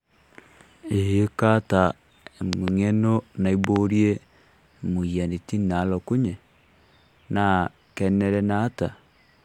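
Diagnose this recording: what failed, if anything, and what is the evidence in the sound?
Likely an analogue wiring transient: loud pops, heard as double thumps at 2.53 and 3.64 s, about 20 and 15 dB above the speech.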